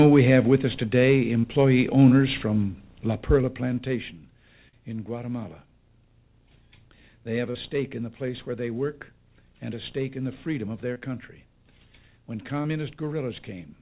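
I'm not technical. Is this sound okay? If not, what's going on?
No. Six times the sound briefly smears or wobbles, at about 1.4, 3.41, 4.69, 7.51, 10.94 and 12.62 seconds. This is short concealed packet loss: tiny pieces, each up to a few hundredths of a second, arrived too late, so the receiver patched each gap by stretching the previous sound.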